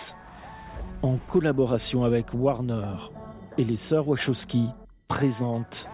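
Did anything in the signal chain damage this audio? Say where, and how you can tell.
No, nothing in the signal chain damaged this audio that I can hear.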